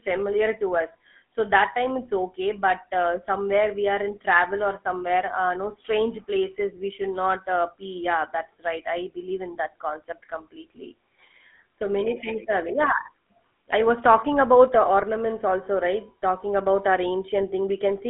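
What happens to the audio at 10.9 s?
At 10.9 s, like the whole clip, it's carrying GSM full-rate codec damage: pulse-driven vocal-tract coding that buzzes and roughens the speech, with nothing above 3.8 kHz.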